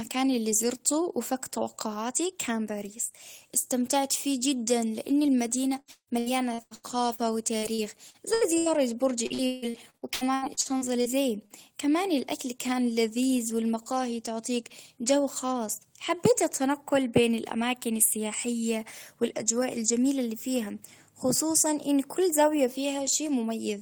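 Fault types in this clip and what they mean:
Repeated packet loss (robotic sound): audio packets kept dropping between about 5.8 and 11.1 s, so the speech breaks into choppy bursts with pieces missing and gaps up to about 150 ms.
Short concealed packet loss: about 40 ms of audio never arrived, so the receiver extended the last sound, leaving a brief smear at 11.5 s just before "كمان الأكل كان لذيذ".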